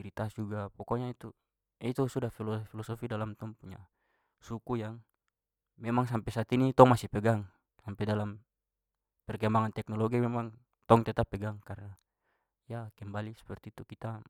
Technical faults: none

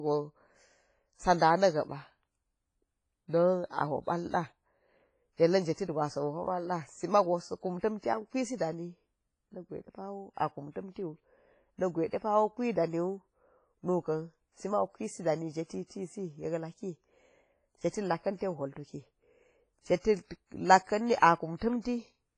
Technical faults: WMA compression; pre-echo

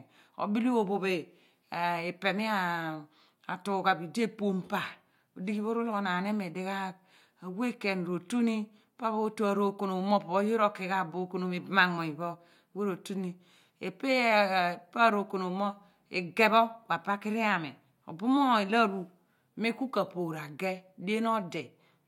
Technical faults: none

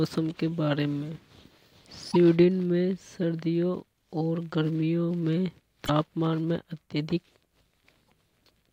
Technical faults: damaged data in a compressed stream

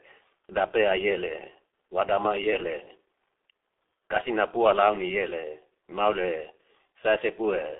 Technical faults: G.723.1 codec

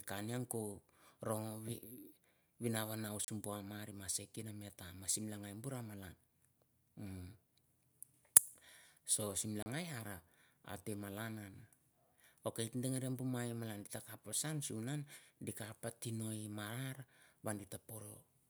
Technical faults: block of digital silence

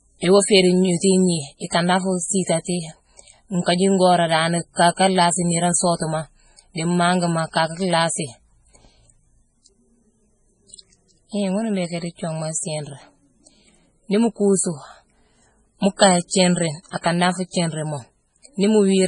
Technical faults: MP3 compression; pre-echo

